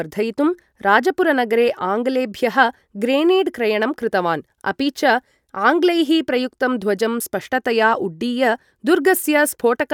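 No technical faults can be heard anywhere in this speech recording; the signal stays steady and intact throughout.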